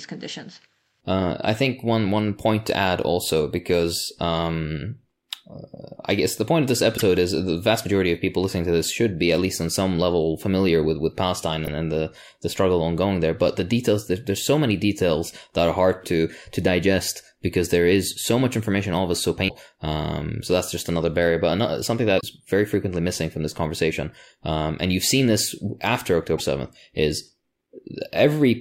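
Damaged data in the compressed stream throws the decoder out of sync, so it misreads frames and hunts for the next header. Brief glitches result at 6.94–7.02 s (after "the point of this"), 11.65–11.68 s (before "and the the struggle"), 19.45–19.51 s (after "all of us so"), 22.17–22.23 s and 26.35–26.40 s.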